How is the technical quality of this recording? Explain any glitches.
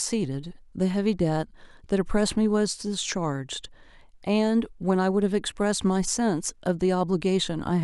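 No faults or glitches are audible.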